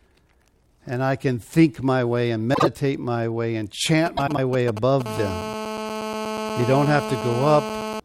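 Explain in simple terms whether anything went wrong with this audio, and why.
Frames out of order, at 2.54 to 2.67 s, just after "think my way and" and before "my way and", and again at 4.17 to 4.38 s. Two neighbouring chunks of sound, about 48 ms each and then about 96 ms each, played in swapped order. That gives a brief garbled flutter.

GSM signalling bursts, from 4.06 to 5.02 s. A nearby 2G mobile phone sent short groups of radio pulses, and the audio equipment picked them up as sound. They come through as a galloping tick-tick-tick pattern mixed with short bits of buzz.

GSM phone buzz, from 5.06 s to about 8.0 s. A nearby 2G phone was transmitting as in a call, pulsing 217 times a second. The recording circuit turned those radio pulses into a steady, harsh, raspy 217 Hz buzz running underneath the speech.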